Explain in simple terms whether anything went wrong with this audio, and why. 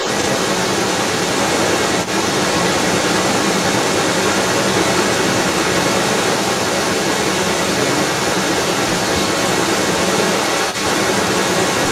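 An echo leak runs from 0 to 11.9 s. A loud copy of the speech returns about a quarter second late, likely from a loudspeaker the echo canceller missed.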